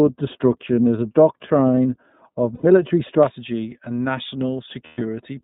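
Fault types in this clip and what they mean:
iLBC codec: The whole clip sounds narrowband, with nothing above 4 kHz, and the speech is clear but slightly rough and synthetic. This comes from a VoIP codec coding each frame's excitation independently, and it fits the 30 ms, 13.33 kbps mode.
de-emphasis applied wrongly: From the start to about 3.23 s the speech sounds dull and muffled, sloping to about 11 dB down at 10 kHz relative to 1 kHz. A treble cut meant to undo pre-emphasis was applied where none existed, or applied twice.
lost iLBC frames: At 2.55 to 2.64 s and 4.85 to 5.02 s the sound turns into a held, faintly buzzy vowel for 90 ms and then 120 ms. The decoder repeats the last pitch cycle mixed with noise to cover missing packets.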